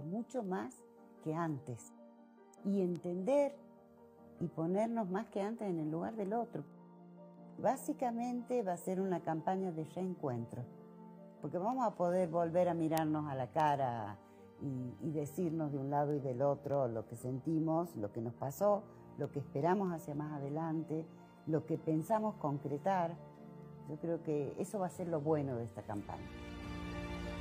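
From 0.45 s to 27.38 s, ticks recur at a steady rate of roughly one every 0.7 s, about forty in all. These are word clock ticks. The receiving device runs on its own clock, roughly 40 ppm off the sender's, so at each slip a single sample is dropped or repeated.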